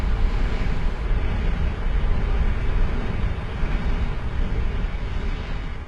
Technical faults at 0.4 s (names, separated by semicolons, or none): none